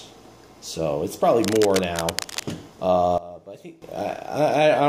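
From 1.43 to 2.43 s, cable scratch noise, likely from a worn cable or connector being moved, rustles about 10 dB under the sound, appearing as ragged broadband specks on a spectrogram.

From 3.18 to 3.82 s, a sudden gain jump drops sound and background together by 18 dB, likely an unramped digital gain change, leaving a flat-edged step in the waveform envelope.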